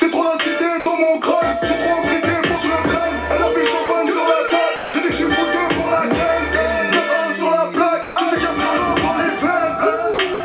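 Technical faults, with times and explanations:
0.80–0.86, 3.86–3.88, 4.48–4.50, 4.76–4.94, 8.02–8.16, 10.14–10.18 and 10.34–10.40 s, sound dropped by the voice detector: the sound gives way to a steady, featureless hiss for 20 to 180 ms, then resumes. This is likely the sender's detector misjudging quieter passages as background and muting them, with comfort noise filled in. Unlike packet-loss concealment, these gaps contain no smeared or repeated fragments, only noise that matches the band-limited background of this call, which has nothing above 4 kHz.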